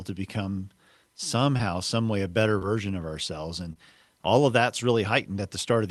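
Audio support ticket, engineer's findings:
Short concealed packet loss, three events. Brief smear at 1.57–1.61 s, just before "some way a better". Again at 2.59–2.63 s, between "some way a better" and "of ourselves". Again at 3.73–3.77 s, just before "all of that's". Component: jitter buffer and decoder concealment on the Opus call path. Mechanism: about 20 ms of audio arrived too late. The receiver stretched the preceding sound to cover each gap, then crossfaded back.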